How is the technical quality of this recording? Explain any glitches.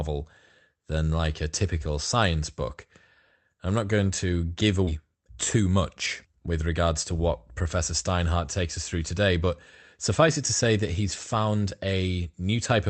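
The recording has two brief network glitches close together, on speech carried over a call path whose coding caps the spectrum near 8 kHz, consistent with Opus at about 32 kbps.

At 4.87 to 4.98 s, just after "not going to give", a skip ahead drops roughly 0.4 s of speech. Audio was lost in transit or discarded by an overflowing jitter buffer while later audio waited, so the waveform shows an abrupt splice with no gap.

At 5.56 to 5.78 s, a jitter buffer speed-up trims pitch periods, about 40 ms in total, running speech at 114% speed with unchanged pitch. The spectrogram shows harmonics at the same spacing, packed slightly closer in time.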